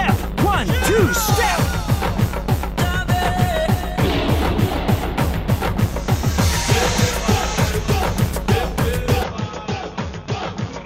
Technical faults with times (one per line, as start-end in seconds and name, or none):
9.23-10.86 input switched to a poorer device